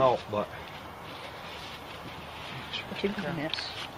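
At 1.47 s the quality drops abruptly and stays low to the end of the clip, the signature of an adaptive stream at a lower bitrate. The player switched to a leaner encoding mid-stream, with no gap at the join. From that point codec artefacts become audible, a change in character that fits a step from roughly 64 kbit/s Opus down to about 24 kbit/s.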